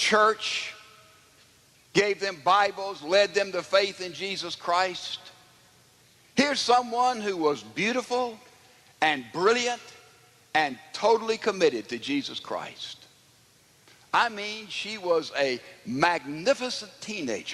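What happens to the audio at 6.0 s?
Nothing goes wrong at 6.0 s; the audio runs through that moment intact, with no dropout, click or other fault.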